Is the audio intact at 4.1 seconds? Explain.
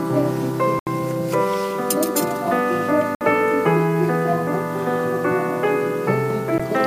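Yes, at 4.1 seconds the audio is intact, with no fault audible at that moment.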